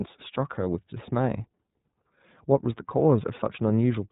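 From start to finish the speech carries the sound of the iLBC codec: a narrowband voice codec coding each frame's excitation independently, with frames here of 30 ms, and a bit rate near 13.3 kbps. It sounds plainly rough and synthetic. A spectrogram shows nothing above 3.8 kHz.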